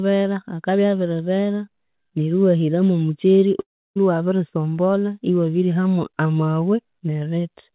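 A speech clip with one clear break: from 3.6 to 3.98 s the sound turns into a buzzy or hissy tail that fades out to near silence, then the talker comes back with about 360 ms of audio simply gone. That's a long network dropout, most likely packets that never arrived, with the receiver stretching the last sound before giving up. The band stops at 4 kHz, which fits a G.711 mu-law call path at 64 kbps.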